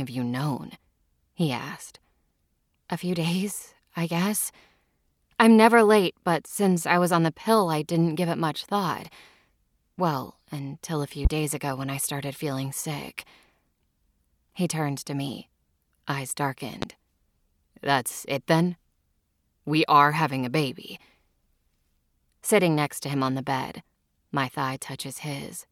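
At 11.25 to 11.29 s, just after "until a few", and again at 16.82 to 16.86 s, after "turned to me eyes", a loud pop thumps well above the speech, which carries on underneath. It is likely a sudden voltage spike. Each one shows as a tall, narrow waveform spike and a full-height vertical stripe on the spectrogram.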